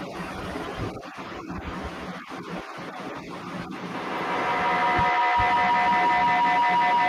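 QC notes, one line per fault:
3.94 to 7.08 s, feedback howl: a second device in the room closes a mic-to-speaker loop that gains on every pass, so the repeats build instead of dying, coming round every 150 ms or so and narrowing to a whine near 1 kHz that peaks about 12 dB over the speech, right to the end.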